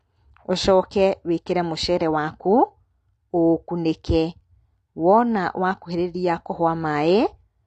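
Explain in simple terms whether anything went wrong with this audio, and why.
The speech was likely squeezed too hard by AAC compression, which discards detail. Throughout, it sounds dull and smeared, with nothing above 9.6 kHz.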